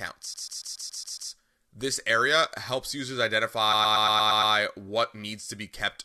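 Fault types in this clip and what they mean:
Repeated frames: from 0.33 to 1.30 s, and again from 3.72 to 4.53 s just after "area helps users", a short chunk of the encoded speech plays over and over as a rapid stutter. The first chunk is 139.3 ms long, which fits a run of about six compressed frames, and it plays seven extra times, adding 0.98 s. The second is 116.1 ms, fitting about five frames, also played seven extra times, adding 0.81 s.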